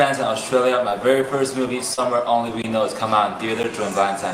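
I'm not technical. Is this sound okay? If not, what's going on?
No, there are two kinds of fault. Short concealed packet loss appears at 0.89 to 0.93 s and 1.93 to 1.99 s. About 20 ms and then 40 ms of sound arrived too late, so the receiver patched each hole by extending the sound just before it. You hear a brief smear or wobble.

There are also two blocks of digital silence, at 2.62 to 2.64 s (20 ms) and at 3.63 s (10 ms). Here the audio abruptly drops to nothing and returns with no fade, so each block comes across as a tick or tiny dropout.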